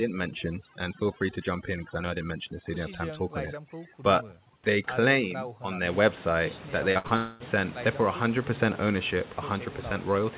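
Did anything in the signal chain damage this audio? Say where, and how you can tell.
Yes. Overdone noise removal, at the call processing stage, runs from 0.00 to 5.88 s. The background drops and breaks up into twinkling, warbling specks. The suppressor was set too strong. It cut bands near its noise estimate, and quiet parts of the speech went with them.

Short concealed packet loss, a network fault, appears at 6.92 to 6.98 s and 7.07 to 7.13 s. Each is a brief smear or wobble. About 30 ms of audio missed the decoder each time. The receiver continued the last sound, then blended back into the real audio.

A burst of packet loss sits between them, from 6.98 to 7.07 s. About 60 ms was lost or arrived too late. The receiver filled the gap by continuing the last sound and turning it down. The audio then resumes with that stretch missing.

From 7.16 to 7.43 s, the last sound is stretched out and fades for about 0.24 s. 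It never falls to silence. The audio then resumes further on, with about 0.24 s gone. This is likely a long network dropout, where nothing arrived and the receiver kept extending the sound.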